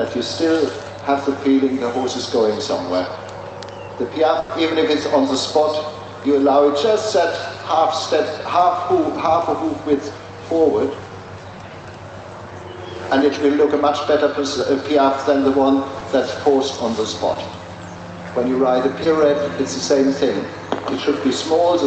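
At 4.39 to 4.51 s the sound stretches into a held, fading tone before jumping ahead. This burst of packet loss was about 100 ms of lost audio, papered over by continuing the last sound.

At 15.99 to 16.03 s, 17.33 to 17.37 s and 19.03 to 19.07 s, brief smears or wobbles appear: short concealed packet loss, each filling about 20 ms of missing audio before blending back.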